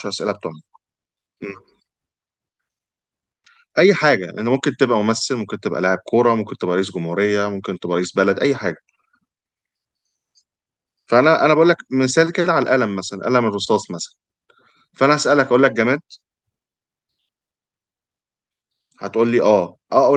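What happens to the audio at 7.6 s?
Nothing goes wrong at 7.6 s; the speech carries on intact through that moment, with only the steady coding character of the Opus call path that runs through the whole clip.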